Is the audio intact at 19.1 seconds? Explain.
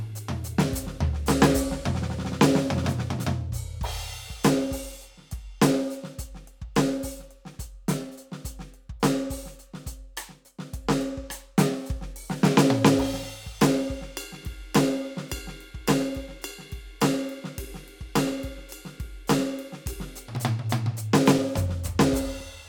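No. Periodic USB or driver dropouts run from 18.32 to 22.41 s. Every 1.024 s, about 2 ms of music drops to silence, giving regular ticks.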